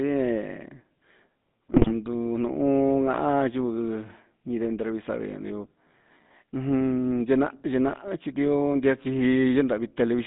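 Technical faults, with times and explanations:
Throughout: GSM full-rate codec. The speech is confined to roughly 150 Hz to 3.7 kHz and carries a buzzy, gravelly roughness from pulse-driven vocal-tract modelling, which fits a 13 kbps GSM coder. Unlike plain band-limiting, the grit sits inside the voice itself.
1.74 to 1.93 s: GSM bit errors. For about 0.19 s the voice breaks into squawks and gargling as corrupted filter, pitch and gain values distort the spectrum and level frame by frame. Unlike a dropout, sound continues, but mangled rather than silenced.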